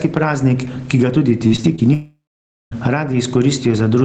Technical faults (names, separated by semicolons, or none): gain pumping; repeated packet loss (robotic sound); long network dropout